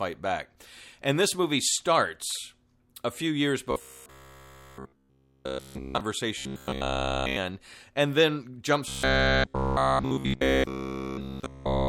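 After "starts a few years", from 3.71 to 6.01 s, again from 6.38 to 7.37 s before "and then", and from 8.88 to 11.88 s, there is robotic sound from repeated short buffers. A 66.7 Hz metallic buzz, likely from a 15 ms block looped almost continuously, follows the speech only roughly. A spectrogram shows evenly spaced harmonic lines, and the waveform shows identical repeating cycles.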